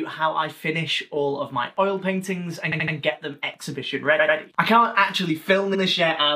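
A faint, steady ticking about ten times a second enters at 1.61 s and runs to the end, roughly 40 dB below the sound. This is Wi-Fi interference: a nearby radio's beacons, every 102.4 ms, are rectified by the audio circuit and leak in as clicks.

Stutters follow at 2.71 to 2.94 s, 4.19 to 4.37 s and 5.74 to 5.81 s. These are repeated frames. A block of about 68 ms plays three extra times, then one of about 93 ms twice more, then one of about 70 ms once more, adding roughly half a second in total.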